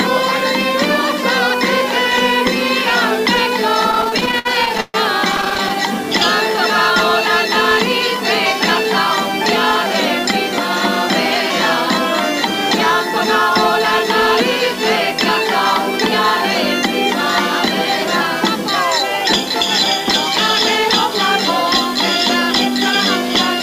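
A distortion runs through the whole clip, and the quiet stretches fill with a gritty noise instead of falling silent. The likely cause is a stuck bit: one data bit held at a fixed value, throwing roughly half the samples off by that bit's weight.

From 3.91 to 4.96 s the audio drags and stutters in repeated stalls, where packets arrived late and the jitter buffer kept running dry. The receiver stretched the last sound to fill about 347 ms, a third of that span, with the longest hold at 136 ms. A lighter stutter follows from 5.32 to 5.71 s, with brief holds of 11 ms or less, about 74 ms in all, and nothing is lost.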